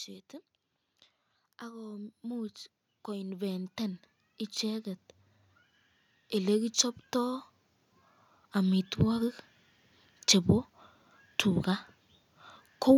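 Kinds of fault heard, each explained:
Automatic gain rising: the gain control judged the speech input too quiet and raised its level gradually, so from 1.34 s to 4.07 s the speech and the background noise swell together by about 9 dB rather than the talker getting louder.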